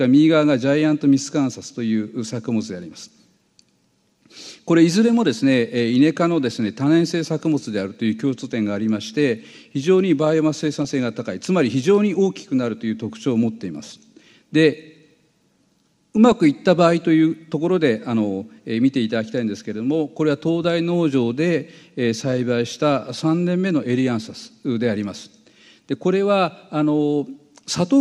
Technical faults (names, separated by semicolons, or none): DAB burbling